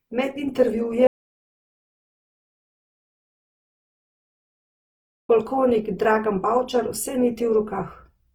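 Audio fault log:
throughout Opus compression: the speech sounds rough, grainy and noisy across the full bandwidth, which is likely Opus music-mode coding at a low rate near 16 kbps.
1.07–5.29 s audio dropout to silence: the speech cuts to total silence without room tone for about 4.2 s, likely from lost input.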